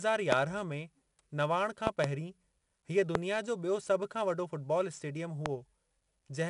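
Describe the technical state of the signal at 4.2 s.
At 4.2 s the speech is still under 4-bit ADPCM compression, which runs through the whole clip. Each sample is coded as a coarse 4-bit step from a prediction, so level-following gritty hiss rides the louder syllables, and nothing reaches above 10.7 kHz, which fits a roughly 22 kHz sample rate.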